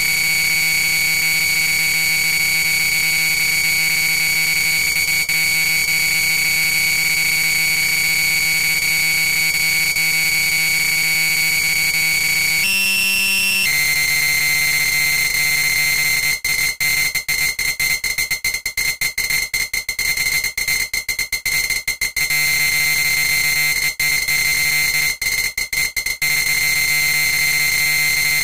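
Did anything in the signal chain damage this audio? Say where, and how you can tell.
No, none of the stages in the chain left any audible damage on these everyday sounds. Nothing heard in the recording points to a problem at any point between capture and playback.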